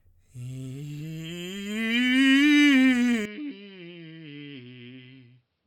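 At 3.25 s the music turns dull and drops about 10 dB, losing everything above 5.6 kHz, likely an input switched to a poorer device; its fresh, faint noise floor rules out simple filtering.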